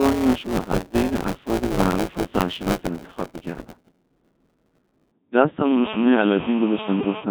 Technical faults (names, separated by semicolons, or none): Codec 2 vocoder; buffer tearing